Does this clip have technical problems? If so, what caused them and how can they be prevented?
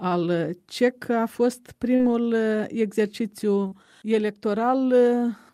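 Yes. Short concealed packet loss at 1.95–2.02 s and 3.67–3.75 s: about 40 ms never arrived, so the decoder extrapolated it, leaving brief smears. Larger jitter buffers or forward error correction prevent it.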